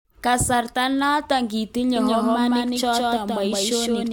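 From 1.96 s to the end, a doubled audio track appears: an equally loud, dry copy trails about 150 ms behind and starts abruptly, with no decay like an echo. A second capture path likely caused it.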